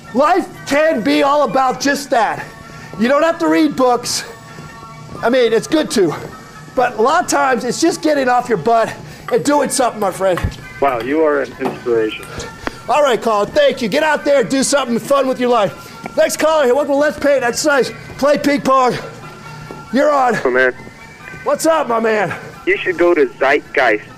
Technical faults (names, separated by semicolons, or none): none